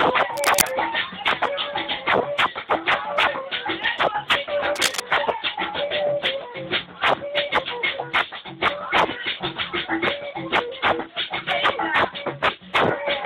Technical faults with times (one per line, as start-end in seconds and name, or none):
0.34-0.69 cable scratch noise
4.65-5.02 cable scratch noise